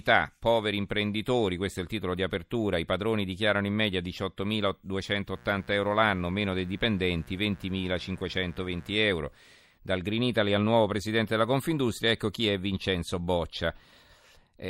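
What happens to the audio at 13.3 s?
Nothing goes wrong at 13.3 s; the speech runs through that point intact, with no dropout, glitch or distortion.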